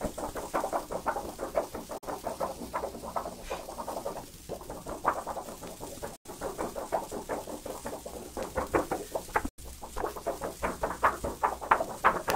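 A digital broadcast dropout mutes the audio at 1.98–2.07 s, 6.16–6.30 s and 9.49–9.63 s. After 8 ms fades, the receiver silenced missing frames (roughly one, then two). The waveform goes flat and the spectrogram shows blank full-band gaps.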